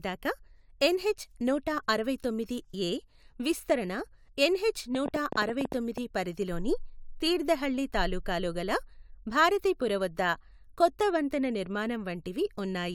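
From 4.95 to 5.99 s a train of clicks runs at about 10.7 per second, roughly ten similar sharp pulses at uneven spacing, peaking about 10 dB above the speech. Likely interference pulses; unlike random crackle, they share one shape. They end just before "పరిధి లోని తీర్థహళ్లి తాలూకాలో".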